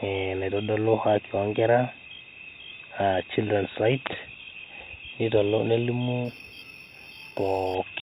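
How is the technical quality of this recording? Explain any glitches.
The recording has one clear fault, imaging from linear upsampling, between 6.25 and 7.75 s. The speech there sounds like a rate raised from 8 kHz to 48 kHz by straight-line interpolation. That weak filter dulls the top of the band and leaves a mirrored copy of the spectrum between 4 and 8 kHz, roughly 25 dB down. You hear it as a faint metallic shimmer on sibilants. On a spectrogram, a pale reflected image appears above a 4 kHz line.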